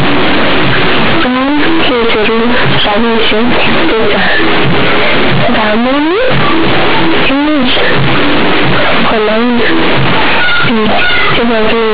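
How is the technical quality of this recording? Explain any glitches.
Poor: the whole recording is dominated by harsh, over-loud buzzing distortion, with heavy noise filling every pause in the speech. The underlying telephone-band sound, cut off above 4 kHz as G.711 coding at 8,000 samples a second would leave it, is buried under this.

From start to finish, this is companded audio read as linear. The mu-law bytes are being played as ordinary 8-bit samples, without the logarithmic expansion that should restore them. Because mu-law packs the sign into the top bit, every sign change throws the output across roughly half its range. Quiet passages come out nearly as loud as strong ones, the waveform is badly bent, and silence turns into dense, coarse noise.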